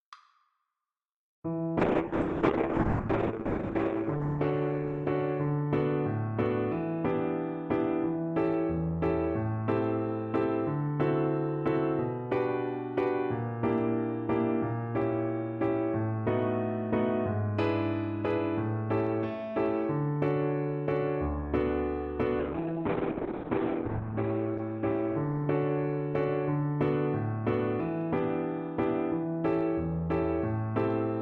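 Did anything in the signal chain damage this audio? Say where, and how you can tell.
Yes. From 1.8 to 6.79 s and again from 22.4 to 27.09 s, the sound turns rough and muffled, with highs cut at 8 kHz, then 4 kHz. This is a call bitrate drop at the codec stage: the falling bandwidth estimate forced coarse Opus coding, fitting a rate near 6 to 7 kbps.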